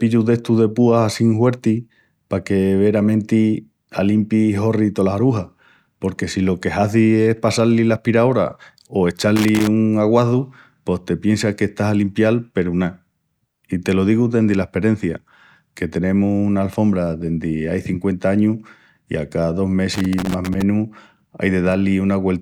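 At 9.36 s the speech gets hit by loose connector crackle for about a third of a second, until 9.68 s, and it comes back from 19.94 to 20.62 s for a longer stretch, roughly 0.7 s. A worn or dirty contact is flickering between connected and open, so the signal keeps dropping in and out, giving that ragged, scratchy burst over the speech.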